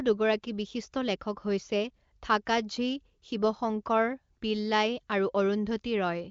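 Speech carried over the AMR wideband (HD Voice) codec at 23.05 kbit/s, its band ending near 7.3 kHz as that codec's does, and nothing in it is faulty.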